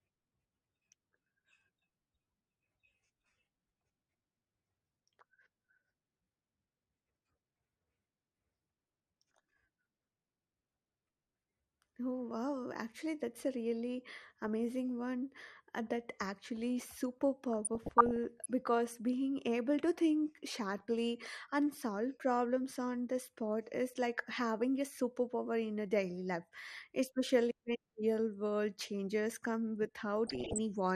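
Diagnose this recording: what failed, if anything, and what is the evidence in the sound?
The codec stage is at fault throughout the 31 seconds of speech. The audio is dull, with upper bands flickering in and out and a granular gurgle on the remaining content. That points to MP2 compression at a low rate, most likely around 80 kbps, where too few bits force whole 32-band sub-bands off and coarsely quantise the rest. Unlike the swirly, tonal smearing of transform codecs, this is band-wise switching plus graininess.

DAB burbling comes from the reception and transmission stage, as residual bit errors reaching the MP2 data. It occurs at 14.17–14.48 s, after "actually that's a really" and before "one uh that actually". It recurs at 17.53–18.46 s, after "uh that actually super" and before "because being able to", and again at 30.27–30.58 s, after "world changes come". Each burst is burbling noise as corrupted samples put short blips into single sub-bands and corrupted scale factors, where they get through, make sub-bands jump in level for up to a frame. 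It fits an error rate well under one percent. Packet loss would instead give gaps or repeats.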